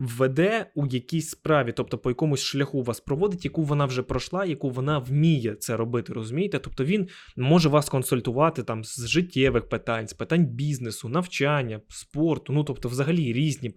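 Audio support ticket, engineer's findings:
No faults found in the speech recording. Nothing heard calls for a symptom, timestamp or component entry.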